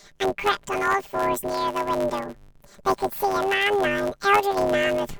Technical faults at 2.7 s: planar audio read as interleaved

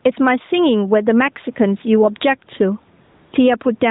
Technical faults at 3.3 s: gain pumping; AMR comfort noise

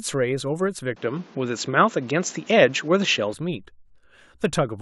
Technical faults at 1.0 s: input switched to a poorer device

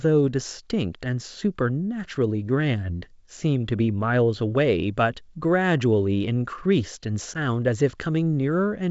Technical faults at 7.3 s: packet loss on an ADPCM call

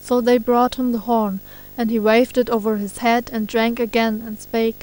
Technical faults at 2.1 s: video or display buzz

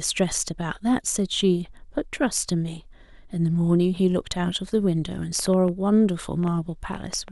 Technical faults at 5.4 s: train of clicks

